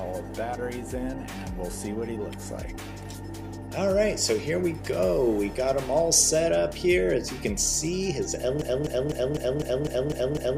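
From 8.62 s to the end, a broken-record loop repeats one 251 ms fragment eight times, likely from a stalled stream resending its last piece.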